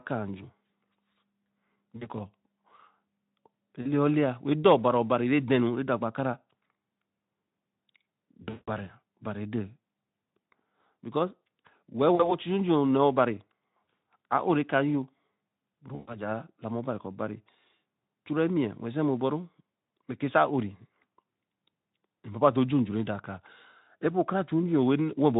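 Speech packets dropped out and the Speex decoder, running at light damage, filled the gaps with VoIP packet loss concealment: it extended the last pitch and filter with fading gain. The speech stretches into a brief decaying smear at 1.97–2.09 s and 3.81–3.87 s. The worst, longer smear follows at 8.43–8.70 s, where the concealed sound stretches and fades for roughly a fifth of a second. Brief smears return at 12.15–12.35 s and 13.84 s, and a longer one at 15.95–16.24 s.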